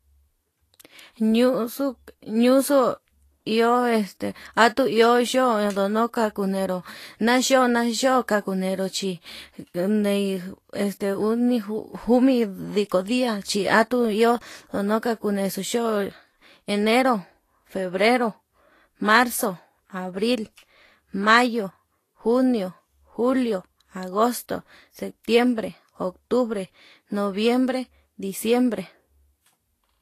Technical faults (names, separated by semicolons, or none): low-bitrate audio saved at a high bitrate